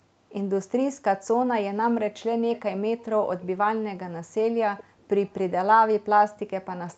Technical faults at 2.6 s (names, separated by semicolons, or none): echo leak